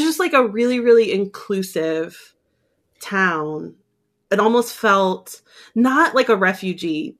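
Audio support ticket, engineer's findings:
Listened through the speech recording and found nothing to flag, so no faults to log on this ticket.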